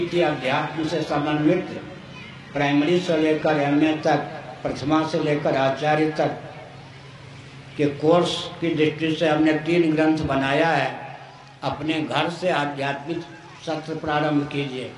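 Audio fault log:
0.0–4.0 s, adaptive stream starting at a low bitrate: synthetic-sounding treble and stronger codec artefacts fit an HE-AAC start near 12 kbit/s; quality jumps without a gap once the player measures the connection and switches up.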